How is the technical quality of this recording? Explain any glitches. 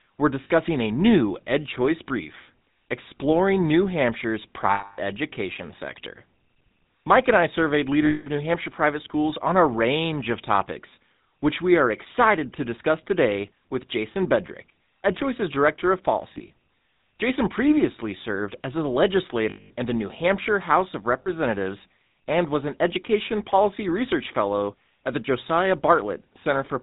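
The recording's technical quality is poor. Audible codec damage runs throughout, and six brief dropouts interrupt the speech.

GSM full-rate codec: Nothing above 4 kHz comes through. The speech sounds buzzy and gravelly. The codec models the vocal tract and drives it with sparse, regularly spaced pulses, which fits 13 kbps GSM full rate.

Lost GSM frames: These occur at 0.44 s before "a new" (60 ms), 4.74 s before "education sector" (240 ms), 8.06 s (200 ms), 16.34 s (100 ms scattered over 160 ms, runs up to about 40 ms), 19.5 s before "in the" (200 ms) and 21.22 s (40 ms). The decoder repeats the last good frame. This gives a rough metallic ring.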